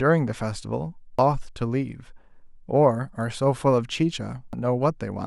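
At 1.19 s and again at 4.53 s the speech is broken by damaged data in the compressed stream. Corrupted bytes reach the decoder, which misreads the affected frame and loses sync until it finds the next valid frame header. The result is a brief synthetic chirp or blip.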